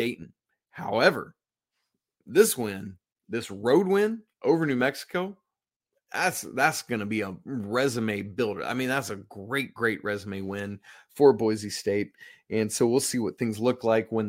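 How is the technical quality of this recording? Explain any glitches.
The technical quality of the recording is sound, with no glitches to explain.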